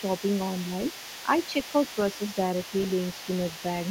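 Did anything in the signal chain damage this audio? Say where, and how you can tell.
Yes. The damage sits in call processing. A second voice runs under the speech from 0 to 3.9 s, faint, roughly 20 dB down. This is the other side's voice leaking through, likely because the echo canceller left loudspeaker playback in the microphone.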